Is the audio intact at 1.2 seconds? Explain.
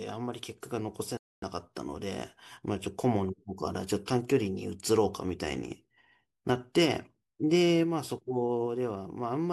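No. From 1.17 to 1.44 s the speech drops to silence for 251 ms and then resumes. This is likely a Bluetooth stall: interference delayed packets, the headphones' buffer emptied, and playback paused until retransmitted data arrived to refill it.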